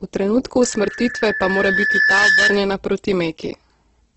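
From the start the speech sounds grainy and rough, with nothing above 8.2 kHz; a spectrogram shows a flat ceiling there and smeared, noise-filled bands below. This is likely Opus compression in its music (CELT) mode at a low rate, somewhere near 12 kbps.

At 0.62 s a loudspeaker feedback squeal begins: a 1.7 kHz tone, picked up by the microphone and recirculated, swells over about a second and a half to sit a few dB above the speech, stopping at 2.65 s. A spectrogram shows one bright horizontal line.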